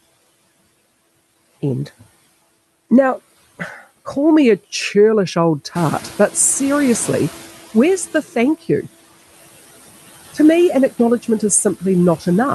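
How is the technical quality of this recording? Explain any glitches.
The speech has two noise-suppression faults. The room noise, about 19 dB below the speech after it rises, belongs to the recording. The top end stops near 12 kHz, which fits an Opus call codec.

Throughout, there are noise suppressor artifacts. The background drops by about 14 dB between phrases and swells back under the speech, because the suppressor cuts noise-dominated bands frame by frame.

From 5.75 to 8.25 s, the noise suppressor is catching up. Around 6 s the room noise jumps by about 11 dB and at first comes through with less reduction. Over 2.5 s it sinks, by about 11 dB, as the suppressor's noise estimate adapts.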